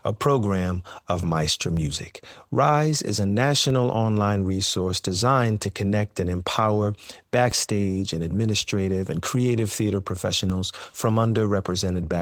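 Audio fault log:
1.77 s, 7.52 s, 10.50 s: DC step. The waveform's zero line jumps suddenly, then drains back slowly through a highpass near 2 Hz. Each jump gives a low thump or click, and the speech carries on with no gap, unlike a dropout click.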